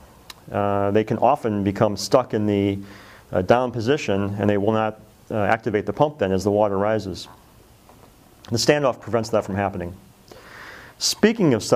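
No technical faults can be heard anywhere in the audio.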